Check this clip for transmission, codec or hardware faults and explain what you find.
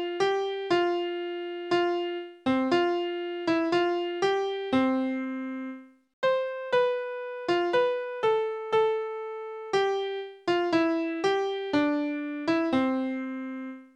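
No faults found.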